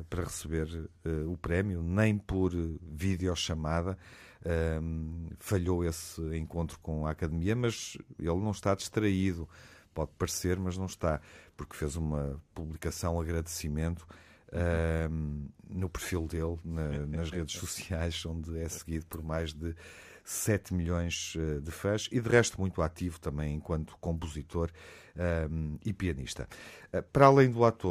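Speech with two brief decoding faults caused by damaged data in a compressed stream. A short blip occurs at 12.75 s, right after "está porque fez uma", and another at 18.81 s, between "redes sociais onde é" and "por mais de". At each point corrupted bytes make the decoder misread the frame, lose sync and hunt for the next valid header, producing a momentary glitch lasting under 20 ms.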